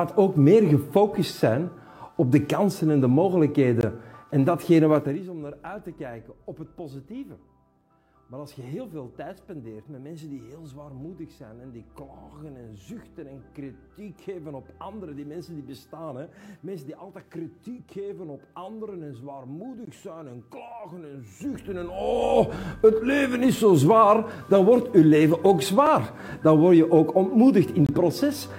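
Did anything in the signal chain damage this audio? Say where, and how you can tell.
Yes. At playback, a gap between stream segments drops in hard-edged silences at 3.81, 19.85, 25.86 and 27.86 to 27.89 s. Their spacing fits 2-second segments.

At the gain stage, zipper noise ticks through stepped level changes: about 15 dB down in 2 dB steps, 4.94 to 5.26 s, then up again, more slowly, 21.2 to 22.36 s.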